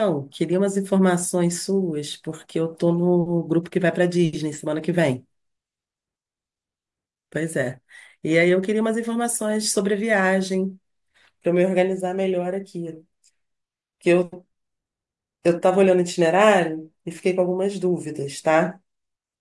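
Nothing technical stands out in this speech recording; it's a straightforward listen with no faults to point to.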